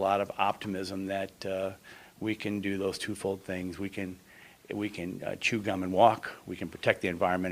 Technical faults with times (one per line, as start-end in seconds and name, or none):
none